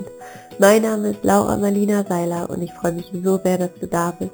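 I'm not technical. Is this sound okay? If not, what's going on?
No. Throughout, there's imaging from sample-and-hold upsampling. Copying each sample without smoothing adds a bright, metallic fizz between 4 and 8 kHz, suggesting low-rate source audio.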